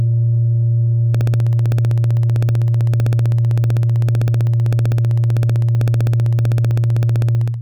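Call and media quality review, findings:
Periodic USB or driver dropouts, 1.15–7.54 s: ticks every 64 ms, each a gap of about a millisecond of silence. Strict even spacing, unlike random crackle, implicates a background task blocking the USB bus or audio driver on schedule.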